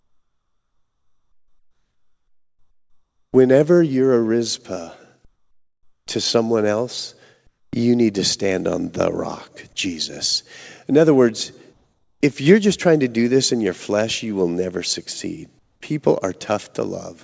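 Comfort noise in place of the background appears in this speech clip at 7.47 to 7.73 s after "to someone else", 11.73 to 12.21 s after "other words", and 15.59 to 15.81 s after "you will never succeed". Each pause's real background, about 48 dB below the loud parts, turns into flat, featureless hiss, about 9 dB louder, then about 2 dB and 5 dB quieter. The likely cause is discontinuous transmission, with the receiver synthesising noise while the sender sits silent. The audio has no content above 8 kHz, which fits a wideband call codec.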